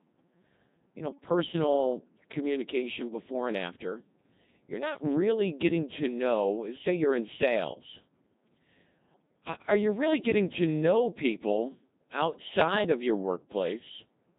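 From start to finish the speech carries the Codec 2 vocoder's heavy signature. Only pitch, voicing, energy and a spectral envelope survive, and the decoder rebuilds the voice from sine waves, giving a robotic, buzzy tone that points to the 2.4 kbit/s mode. Unlike ordinary low-bitrate smearing, the waveform itself is synthetic.

From 9.14 to 9.22 s, bit errors on digital voice radio break through. A few percent of flipped bits corrupt the parameters of what fits about three frames, so pitch, level and timbre jump into a short warbling bleep. This is garbled parameters, not the steady vocoder buzz or a silent dropout.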